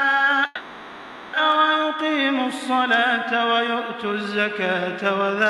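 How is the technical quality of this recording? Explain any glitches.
One glitch stands out: a call audio freeze from 0.45 to 1.35 s. For about 0.88 s the last sound hangs on as a fading buzz without reaching silence. Then the audio resumes where it stopped, with nothing lost but everything afterwards running 880 ms late. Packets were likely delayed until the jitter buffer ran dry. On a spectrogram this appears as smeared horizontal bands thinning out. The waveform shows a repetitive, decaying stretch.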